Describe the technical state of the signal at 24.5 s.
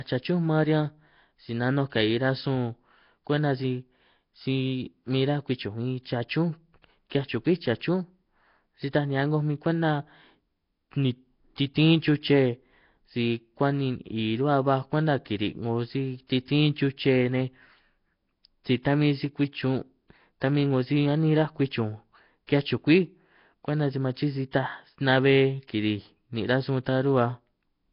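At 24.51 to 24.53 s a pre-echo appears: a 22 ms smear of hiss precedes a sharp attack, because quantisation noise spread across the transform block fills the quiet lead-in. Throughout, the speech has a rough, hissy, underwater quality with nothing above 5.3 kHz, likely from Nellymoser compression at a low, fixed bitrate.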